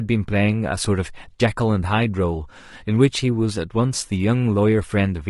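Low-delay AAC compression throughout: speech sounds rough and grainy, likely because AAC-ELD's short frames resolve pitch harmonics poorly at a bitrate fitting 32 kbps.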